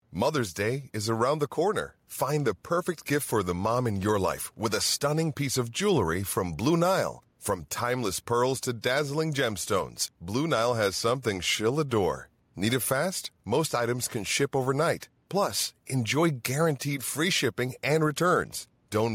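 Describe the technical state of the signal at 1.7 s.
At 1.7 s you're hearing gain pumping, which runs through the whole clip: the gain ducks by around 5 dB under each loud burst of speech. That's likely a fast limiter clamping down on input gain set far too hot.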